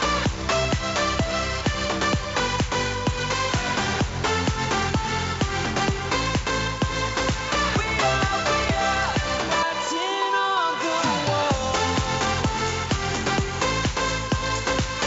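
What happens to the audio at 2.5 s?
Nothing goes wrong at 2.5 s: the audio runs on intact there, carried through the call path with its content stopping at about 8 kHz.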